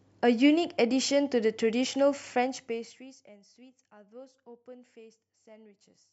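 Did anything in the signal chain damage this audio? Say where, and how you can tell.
No, nothing along the chain from capture to playback has left an audible mark on this speech.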